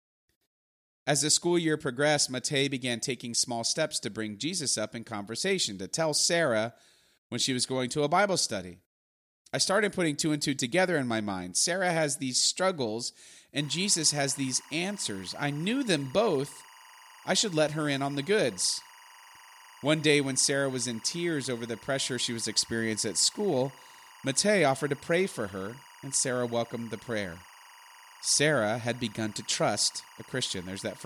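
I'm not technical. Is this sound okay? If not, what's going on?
No. From 13.60 s to the end, a faint chirping warble sits behind the speech. This is timecode bleed, a timing signal leaking in from a nearby cable. Unlike a steady whine, it keeps flipping between two high pitches, around 1 and 2 kHz.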